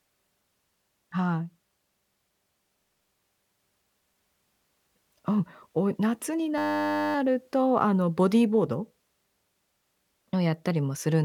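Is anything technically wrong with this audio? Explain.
Yes, there's a system hang loop from 6.58 to 7.15 s. The system stalled while the audio hardware kept replaying one 10 ms chunk, which fits a small buffer. At 100 Hz, that repetition reads as a steady buzz, with essentially no speech lost.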